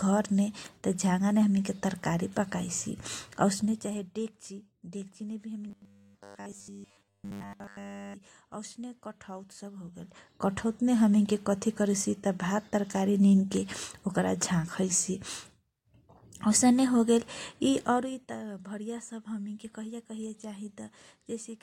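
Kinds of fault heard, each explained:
Zipper noise: level shifts by roughly 15 dB in 2 dB jumps, 15 to 20 per second, each clicking; staircase waveform envelope, faint vertical spectrogram lines.
Robotic sound from repeated short buffers: rigid metallic 100 Hz buzz, likely one 10 ms chunk looping; waveform repeats identically, spectrogram shows flat harmonics spaced 100 Hz.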